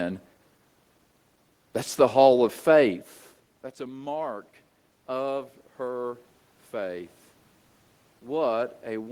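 Just after "a mark", from 5.07 to 7.17 s, automatic gain rising is heard. The input had dropped by about 17 dB. The gain control responded by lifting its gain about 3 dB over two seconds. Voice and room noise swell together.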